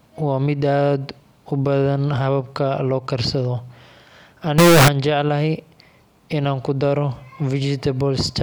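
From 4.58 to 4.88 s the speech turns into a loud, harsh buzz, likely float read as integer: 32-bit float samples interpreted as 32-bit integers. The waveform jumps to a near-square shape at an almost fixed, high level, and the spectrogram fills with dense broadband energy.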